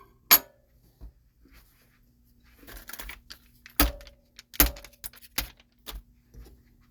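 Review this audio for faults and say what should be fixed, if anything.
Nothing needs fixing: no technical faults can be heard anywhere in this audio.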